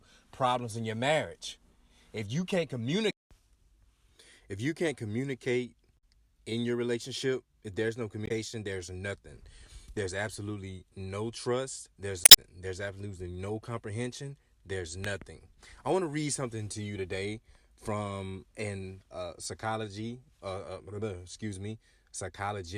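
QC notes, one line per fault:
5.94–6.03 s, 8.24–8.31 s, 12.21–12.38 s: damaged data in a compressed stream. Short glitches after "if you can't communicate", "your relationship there's no" and "absolutely no trust", as the decoder loses sync on corrupt frames and jumps to the next header.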